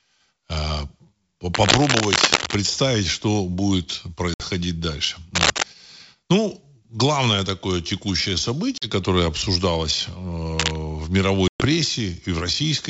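A worn cable, plug or control, likely, was shifting and changing its contact resistance, producing cable scratch noise at 1.54 to 2.55 s, 5.35 to 5.63 s and 10.59 to 10.76 s. Each burst is a dense, ragged scratching laid over the speech, about as loud as the speech or a little louder.

Packet loss on the ADPCM call cut holes of 60 ms at 4.34 s, 40 ms at 8.78 s and 120 ms at 11.48 s, the last spanning several packets. The decoder's predictor and step size then lost track of the sender's, so each hard-edged silence ends with a brief, slightly distorted restart.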